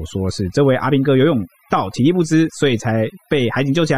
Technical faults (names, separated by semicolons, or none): overdone noise removal